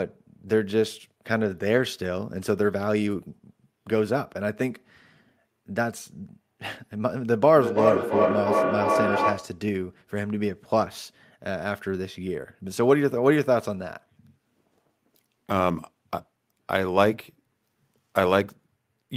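From 7.56 to 9.62 s the speech comes round again roughly every third of a second, thin and ringing, with repeats as loud as the speech itself. This is feedback echo between two devices: a nearby device replays the audio, and the microphone recaptures it.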